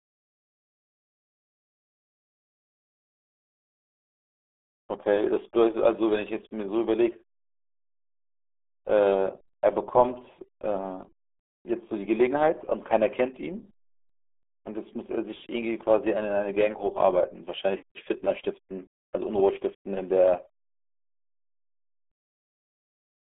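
From start to finish the speech carries the RealAudio 14.4 codec's damage. It sounds muffled and gargly, which fits heavy coding at about 8 kbit/s. A spectrogram shows energy confined to roughly 300 Hz to 3.5 kHz, with nothing above 3.7 kHz.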